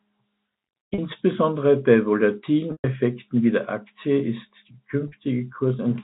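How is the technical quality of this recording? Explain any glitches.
Three dropouts stand out, all from packet loss with pitch repetition, heard through a telephone-band G.711 channel that cuts off at 4 kHz. At 0.94 to 0.98 s and again at 5.08 to 5.12 s, about 40 ms goes missing each time, which fits two 20 ms packets. The receiver fills the gap by looping the last pitch period, so you hear a brief held, buzzy tone. The 120 ms loss at 2.72 to 2.84 s outlasts the repeat, fades to silence, then cross-fades back.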